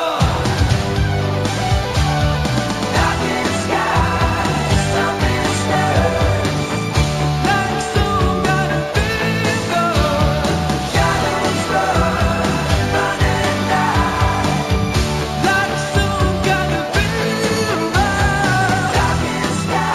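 Imaging from linear upsampling runs through the whole clip. The audio was raised from 16 kHz to 44.1 kHz by joining samples with straight lines, a poor interpolation filter. The top of the original band is dulled, and a mirrored copy of it sits between 8 kHz and 16 kHz, roughly 25 dB below the signal, giving a light metallic shimmer on bright content. Unlike aliasing, which folds energy downward, this adds mirrored content above the original band.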